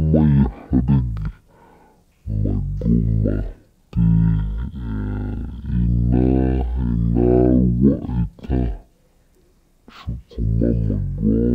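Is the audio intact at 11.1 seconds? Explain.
No. Stereo read as mono affects the speech at 11.1 seconds, as it does throughout. Left and right samples were read in turn as one channel, doubling the sample count, so playback runs at 0.5x speed and sounds a full octave, 12 semitones, low.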